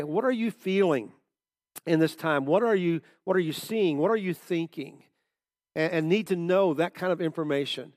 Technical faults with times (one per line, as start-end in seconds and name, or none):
none